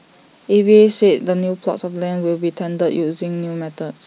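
No technical faults are audible anywhere in the speech recording.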